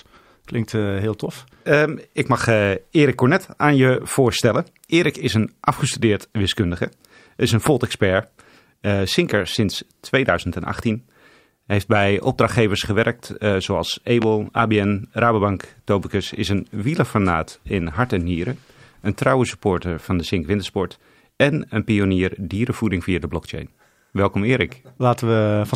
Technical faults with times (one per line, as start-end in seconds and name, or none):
7.66-7.69 loud pop
14.22-14.25 loud pop